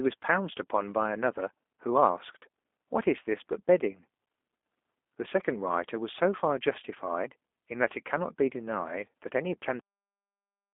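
From the very start, the whole clip has that narrow, slightly rough phone-line quality you get from the G.729 codec. The speech only occupies roughly 250 Hz to 3.5 kHz, with nothing up top and thin lows, and the codec damage is plainly audible. The encoder models the vocal tract and pitch and approximates the rest with a few pulses per frame, so voices come out a touch synthetic and buzzy, which fits an 8 kbit/s G.729A stream.

Then at 9.80 s there's a cut-off end. The audio just stops mid-sound and drops straight to digital silence for the remainder, with no decay or tail at all. That's what happens when the final buffers never get written out or played, so whatever was in flight at that moment simply vanishes instead of finishing naturally.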